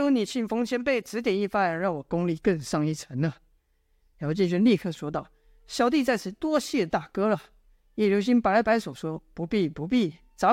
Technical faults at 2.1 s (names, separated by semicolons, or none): none